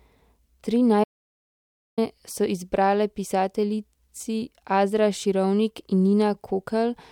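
A speech recording in which the sound cuts out abruptly at 1.04 s and stays completely dead, with no room tone at all, until 1.98 s, when it resumes mid-flow on "so izbrale pisateljici". This is an audio dropout to silence lasting about 0.94 s, and whatever was said in that stretch is lost. The likely cause is the input briefly disappearing, from a dropped connection, a failing device link or an accidental mute, while the recorder kept writing silence.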